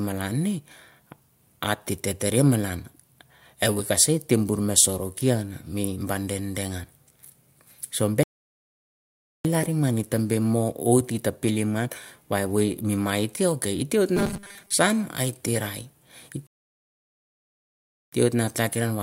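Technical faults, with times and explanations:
8.23–9.45 s and 16.47–18.12 s, rebuffering stall. The speech cuts to dead silence twice, for about 1.2 s and then about 1.7 s. Each time it picks up exactly where it broke off. Nothing is skipped or repeated. The player ran out of downloaded audio and had to wait for more data before continuing. So the gaps add time to the clip rather than removing any speech.
14.17–14.73 s, robotic sound from repeated short buffers. For just over half a second the speech turns into a rigid, metallic buzz at 200 Hz. It still roughly follows the shape of the speech, but most of the real sound is missing. The likely cause is audio arriving too seldom, with the software looping a tiny stretch, about 5 ms, to fill the gap. That fixed loop length sets the buzz pitch.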